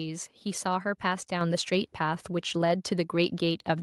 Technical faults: microphone volume stepped up

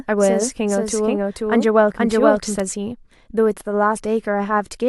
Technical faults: doubled audio track

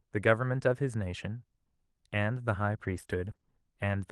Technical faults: repeated packet loss (robotic sound)

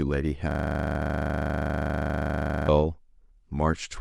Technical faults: system hang loop; compressed frames skipped

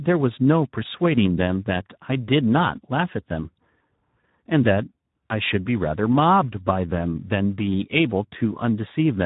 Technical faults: Speex codec

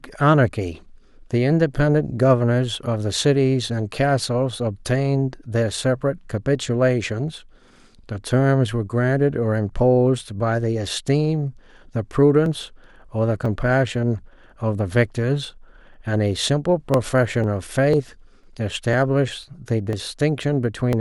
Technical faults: periodic USB or driver dropouts

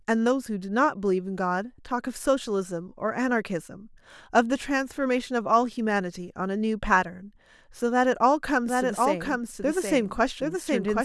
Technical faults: doubled audio track

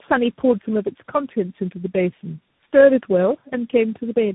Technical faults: tandem speech coding

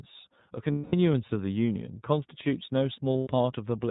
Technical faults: iLBC codec; lost iLBC frames

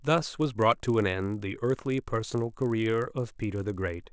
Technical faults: resampler restarted on every block

